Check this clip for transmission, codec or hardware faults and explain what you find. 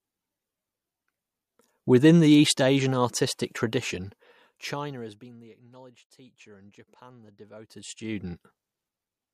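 Zipper noise occurs twice in this speech. From 4.24 to 5.52 s, between "artistic tradition" and "acknowledged teacher and", the level falls roughly 25 dB. From 7.52 to 8.4 s it rises by about the same. Each move comes in unsmoothed 1 dB steps, around 30 a second, so every step clicks and the fades carry a fine ticking buzz.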